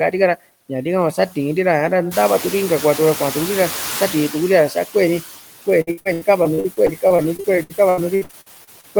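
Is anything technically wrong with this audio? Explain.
Yes. Three faults are audible in this speech clip.

Noise suppressor artifacts run through the whole recording. The suppressor estimates steady background noise and attenuates each frequency band it judges to be noise, frame by frame, here by about 17 dB. The residual background therefore drops in the pauses and swells back up under the speech.

Noise suppressor catching up occurs from 2.11 to 5.24 s. Around 2 s the room noise jumps by about 15 dB, settling roughly 12 dB below the speech. The suppressor's noise estimate lags behind this change, so at first the louder background passes with only about 11 dB of reduction. Over about 3.1 s the estimate adapts, and the noise sinks back to the deeper level heard elsewhere.

Repeated packet loss (robotic sound) affects 5.81 to 8.85 s. Audio repeatedly went missing, roughly two dozen short dropouts, the longest around 80 ms. 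Each hole was patched by extending the preceding sound, with the next loss arriving soon after. Concealment covers about 30% of that stretch, so the speech turns choppy and takes on a robotic timbre, with fragments absent.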